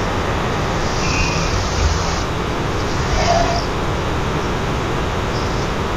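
Stereo read as mono runs throughout: interleaved left and right samples are read as one channel, so the speech plays at half speed, a full octave low.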